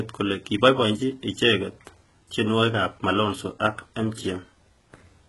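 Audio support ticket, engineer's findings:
Speech, whole clip: heavy codec damage, s sounds gritty, metallic, lispy; nothing above 11.5 kHz. Likely HE-AAC compression, fits about 12 kbps. Treble rebuilt from copied lower bands, so harmonics misalign. Unlike plain low-pass, treble stays bright but synthetic.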